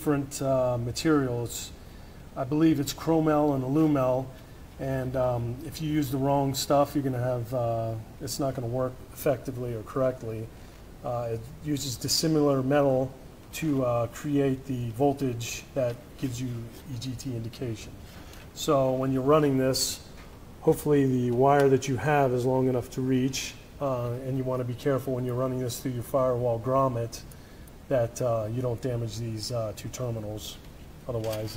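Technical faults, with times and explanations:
10.56–10.80 s, loose connector crackle: a short, irregular burst of scratching and crackle lasting about a quarter of a second. A worn or dirty contact is making and breaking as it shifts, chopping the signal on and off, with pops where any DC on the line jumps.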